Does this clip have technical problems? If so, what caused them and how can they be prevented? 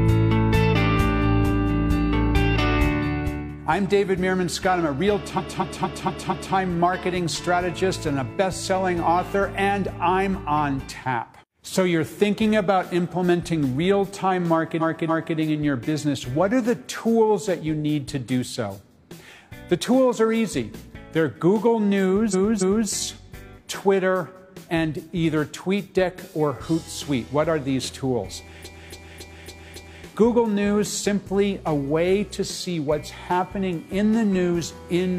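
Yes. The clip has repeated frames in four places. From 5.34 to 6.51 s a 232 ms block plays five extra times, adding 1.16 s. From 14.77 to 15.33 s and again from 22.29 to 22.85 s a 279 ms block plays twice more. From 28.61 to 30.00 s a 279 ms block plays five extra times. Each is a stutter caused by the same compressed frames being written or sent again, which lengthens the audio. Deduplicating frames by sequence number or timestamp before decoding prevents this.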